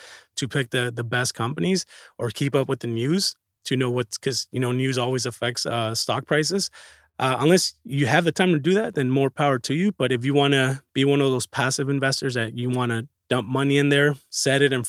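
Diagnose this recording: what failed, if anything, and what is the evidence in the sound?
Clock drift between sender and receiver is the root problem, and it sits at the network and jitter buffer stage. The sender's clock runs slow, roughly 3 percent behind the receiver's, so the buffer keeps draining faster than packets refill it. You can't hear the drift directly. What you hear is the receiver's repeated efforts to cover the shortfall, which leave the speech sounding subtly unsteady from start to finish.

The repeated timing corrections run from about 0.57 s to 14.79 s. The receiver keeps stretching short pieces of the speech to stay in step, so playback comes out at around 98 percent speed, with roughly 0.4 s added over that span. The stretches all push the same way but land at uneven intervals. Listen for tiny hiccups and a tempo that never quite settles, rather than any single obvious glitch.

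The short stall from a late packet is at 7.09 to 7.17 s. One packet didn't arrive in time and the jitter buffer ran dry, so the receiver held the last sound for about 50 ms until it showed up, then carried on where it had stopped. Nothing is lost, but that sound hangs a beat too long with a slight buzz or dip, and the delay steps up by 50 ms from that point.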